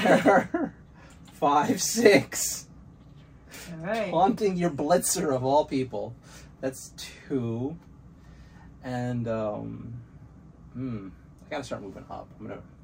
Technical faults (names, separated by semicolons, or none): none